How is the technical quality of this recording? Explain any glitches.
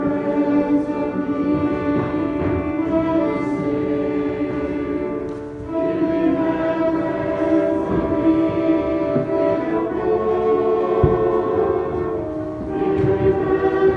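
No glitches to explain: no dropouts, clicks, distortion or other faults are audible anywhere in the recording.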